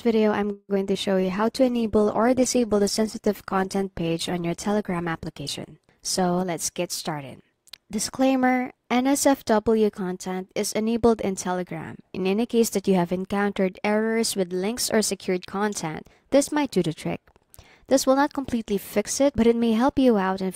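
At 0.51 s the sound stops advancing and is carried on by an artificial continuation that decays to near silence for its last few hundredths of a second, likely a call audio freeze where packets stalled and the jitter buffer ran dry. When the sound resumes at 0.71 s it picks up where it left off, so about 0.17 s of delay has been inserted and nothing is lost.

Just after, at 0.75 s, a short concealed packet loss follows: about 20 ms never reached the decoder in time. The receiver bridges the hole by extending the preceding sound for roughly 10 ms and then blending back, leaving a brief smear lasting about 0.03 s.

From 1.19 s to 6.48 s the call bitrate drops. The bandwidth estimate collapsed and the encoder was forced onto far fewer bits. The sound loses its top end and turns coarse and watery for over five seconds, which fits a fall from about 128 kbps to 15 kbps.

From 6.42 s to 8.94 s a jitter buffer speed-up follows. 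With too much audio queued, the receiver repeatedly cut out short pitch-period slices, around a fifth of a second in total. Playback runs about 7% fast at unchanged pitch, so the passage sounds slightly hurried.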